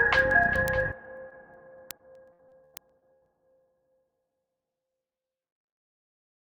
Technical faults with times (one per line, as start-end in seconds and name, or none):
1.29-1.33 short concealed packet loss
1.97-3.23 repeated packet loss (robotic sound)